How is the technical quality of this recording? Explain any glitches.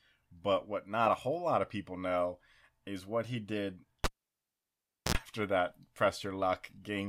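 One glitch: a cable pulled and plugged in at 4.04 to 5.15 s, after "is what he did". The live connection breaks, giving a pop and about 1.06 s of near silence. Then 64 ms of 60 Hz mains buzz sounds as the plug's tip touches, and a second pop marks the sound's return.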